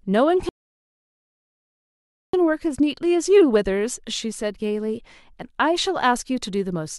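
At 0.49 s the playback ran out of downloaded audio, a rebuffering stall: the player had nothing left to play and waited for more data to arrive. The speech drops to silence and stays there until 2.34 s, then picks up exactly where it broke off, with nothing skipped. The pause adds about 1.8 s to the clip's running time, so the speech simply halts mid-flow and continues after the gap.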